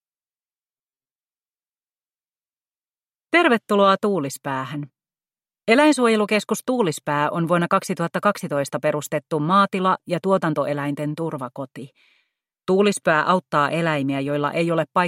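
From 0.78 to 1.20 s the sound turns into a rigid, metallic buzz pitched at 133 Hz, roughly following the underlying audio but with its natural movement flattened. This is robotic sound from repeated short buffers, likely caused by audio arriving too slowly so the playback fills gaps by looping a short fragment of about 7.5 ms. About half of that stretch is repeated material, with the real audio skipped in between.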